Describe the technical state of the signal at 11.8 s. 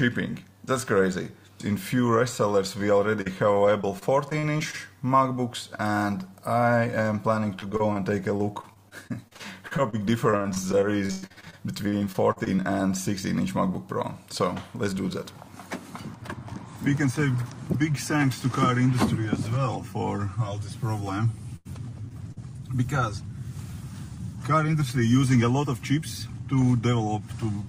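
At 11.8 s the signal is in the middle of repeated packet loss (robotic sound), running from 10.31 to 12.60 s. Some twenty short holes open across that stretch, the longest about 109 ms, and each is papered over by extending the last bit of sound, so roughly a quarter of the span is concealment. That yields choppy sound with pieces missing. Unlike a single dropout, the holes keep recurring and are filled, not silent.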